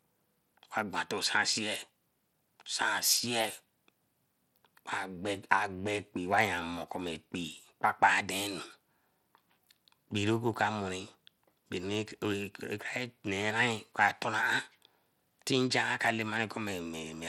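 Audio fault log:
Throughout: Bluetooth SBC compression, likely. The speech carries plainly audible coding damage. Nothing survives above 16.9 kHz, and the treble below that edge flickers as the codec's simple sub-band bit allocation starves the weakest high bands from moment to moment. The remaining bands are quantised coarsely, so a gritty noise and aliasing ride on the sound, which fits a tight bit budget around 96 kbps.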